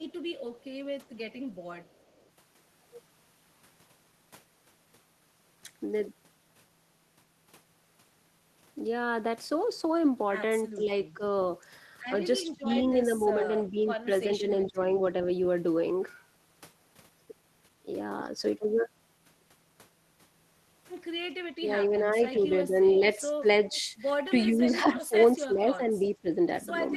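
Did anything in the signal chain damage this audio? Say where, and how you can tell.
Yes. The damage is in call processing, in the echo canceller on a far end that is likely playing the call over a loudspeaker. An echo leak puts a delayed copy of the speech back into the clip, lagging 384 ms behind the original. It is faint from 0.60 to 2.29 s, roughly 40 dB down. It is briefer and stronger, around 20 dB down, at 14.62 to 14.66 s, and sits about 25 dB down from 22.46 to 23.81 s and at 26.04 to 26.09 s.

Speech suppressed in double talk is the same processing failing the other way. While both sides talk at once, the canceller likely cannot tell its own talker from the loudspeaker return, so it ducks both. The speech dips by around 10 dB between 10.75 and 11.22 s. Between 12.46 and 14.86 s it drops by up to 20 dB, in pieces adding up to about a second. There is a short 15 dB hole at 18.58 s, and from 21.58 s to the end the level keeps sagging by up to 15 dB.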